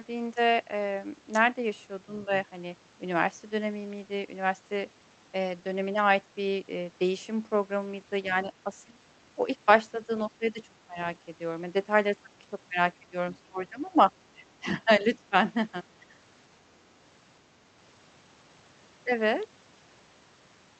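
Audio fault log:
8.29–8.98 s, 9.66–10.98 s, 12.23–12.32 s, 12.99–16.14 s: speech suppressed in double talk. The speech dips by up to around 15–20 dB in patches, likely because the echo canceller ducked it while the far end spoke.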